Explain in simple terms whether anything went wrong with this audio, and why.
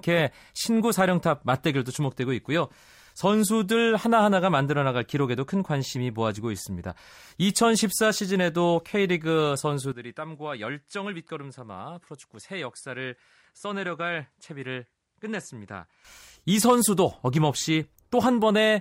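From 9.92 to 16.05 s the speech suddenly turns duller, quieter and faintly hissy, then snaps back: likely an input switched to a poorer device.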